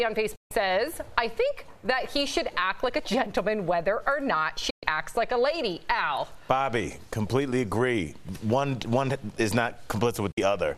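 The audio cuts out three times in short, abrupt silences, from 0.35 to 0.51 s, 4.70 to 4.83 s and 10.31 to 10.38 s, each entered through a very quick 8 ms fade. This is a digital broadcast dropout: the receiver lost the signal or rejected corrupted frames and muted until clean ones arrived. The gaps of 144, 120 and 48 ms fit whole 24 ms frames going missing, and what was transmitted then is gone.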